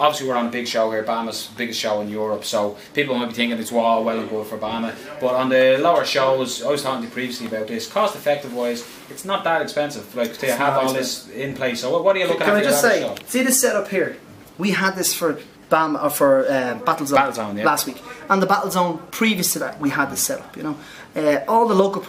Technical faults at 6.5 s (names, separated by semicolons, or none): none